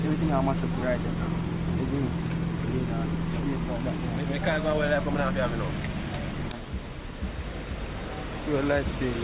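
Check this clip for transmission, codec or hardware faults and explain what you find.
No transmission, codec or hardware faults turn up here: the audio carries the ordinary character of a call path, with the bandwidth stopping at 4 kHz in a way that fits G.711 mu-law at 64 kbps.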